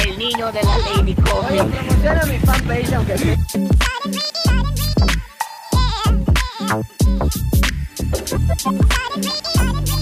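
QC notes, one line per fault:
0.38–3.69 s, call bitrate drop: the encoder falls from 96 to 25 kbps and stays at the lowest rate for about 3.2 s, so the sound turns coarse and watery with the top end cut away. Unlike packet loss, there are no gaps or dropouts, and full bandwidth returns once the bitrate recovers.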